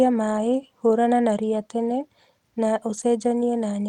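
From 2.97 to 3.03 s, a lost packet rebuilt from error correction: about 40 ms of speech, which fits two lost packets, was replayed from the low-bitrate copy carried in the next packet. The result is rougher and noisier, unlike a dropout's silence or concealment's smeared repetition.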